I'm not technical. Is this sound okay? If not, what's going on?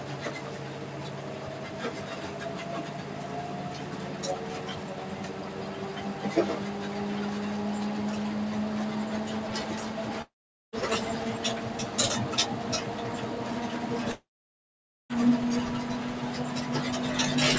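No. A noise suppressor meant for speech is working on these sounds throughout. Sharp starts come through, but held sounds and their tails get pushed down, so the audio pumps and thins.

There are also two gaps, likely from a long network dropout, at 10.22 to 10.76 s and 14.12 to 15.13 s. Each time, the sound briefly smears into a fading buzz or hiss, goes silent, then resumes with that stretch missing rather than just stuttering.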